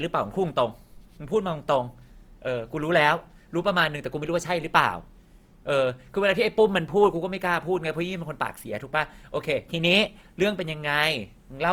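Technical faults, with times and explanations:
Throughout, Opus compression: grainy, rough texture with noise-filled bands and fewer swirly holes than MP3, content to 20.2 kHz, likely CELT mode around 24 kbps.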